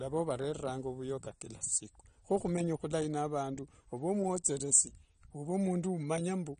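The whole speech track stops dead at 9.7 kHz and sounds dull and warbly, likely AAC compression squeezed to a low bitrate around 32 kbps.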